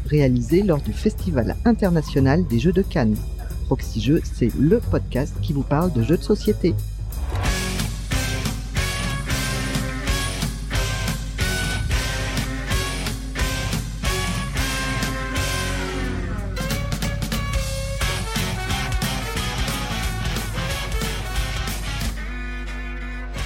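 Mains hum runs throughout: a steady 50 Hz tone, fairly loud against the sound, from power-line coupling. A spectrogram shows a constant line at 50 Hz.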